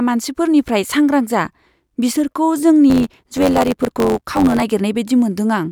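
From 2.89 s to 4.62 s the speech picks up a buzz at about 92 Hz and runs about 1.07 times fast: a block size mismatch (truncated), consistent with 512-sample blocks whose ends are dropped. Unlike a resampling error, the timbre stays.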